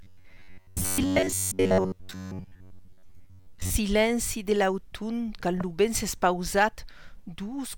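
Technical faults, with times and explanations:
0.01–3.71 s, robotic sound from repeated short buffers: a rigid metallic buzz at 93.8 Hz, likely an 11 ms chunk looped in place of most of the real audio.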